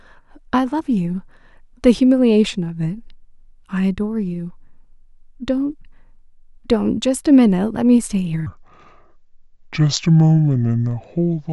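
From 8.47 s until the clip ends, the speech sinks into a deep, dragging register, about seven semitones lower and clearly slower. This section at the wrong speed plays at 0.669 times its recorded rate, likely from being fitted to a mismatched clock.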